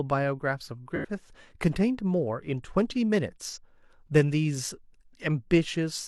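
At 0.96 to 1.06 s and again at 3.49 to 3.58 s, AAC frame loss with concealment smears the speech into a brief noisy, phasey patch. The decoder rebuilt the missing spans, about 85 ms and 43 ms, consistent with two frames and one, from the previous spectrum.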